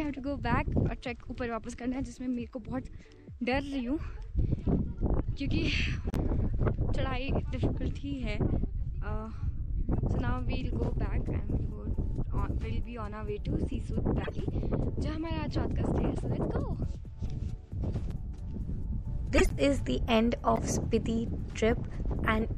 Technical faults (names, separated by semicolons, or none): MP3 compression; corrupt frame decoded